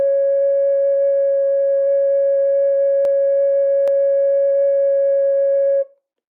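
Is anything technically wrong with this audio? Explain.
Yes, there are two sharp clicks in the music, at 3.05 s and 3.88 s. Each is a tiny discontinuity, most likely dropped samples: a fraction of a millisecond goes missing, so the waveform jumps straight from one value to a later one. That's far too short to lose any audible music, but the sudden step comes through as a single crisp tick, and on a spectrogram each one would show as a thin vertical line.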